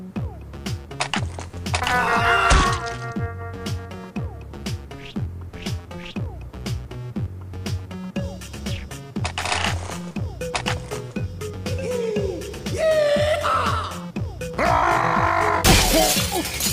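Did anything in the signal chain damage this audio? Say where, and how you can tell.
No, no signal-chain damage detected.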